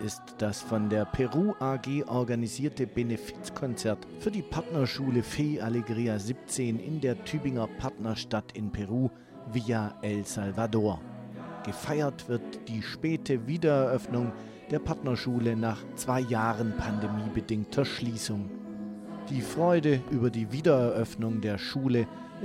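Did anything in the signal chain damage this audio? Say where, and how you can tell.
No, none of the stages between capture and playback left any audible damage on this signal.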